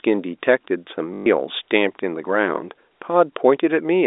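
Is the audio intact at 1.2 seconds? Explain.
No. From 1.14 to 1.26 s, about 120 ms of audio is missing, and the gap is filled by packet loss with the last packet repeated. The receiver replays one short stretch of sound over and over. The run buzzes near 50 Hz, which fits six lost 20 ms packets. That robotic stutter sets it apart from a dropout, which would fall silent, or from concealment that fades smoothly.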